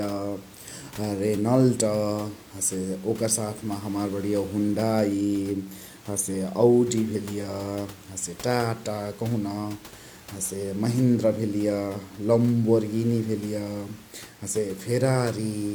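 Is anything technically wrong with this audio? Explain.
No, nothing is technically wrong.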